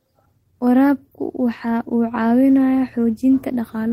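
No technical faults can be heard in this speech.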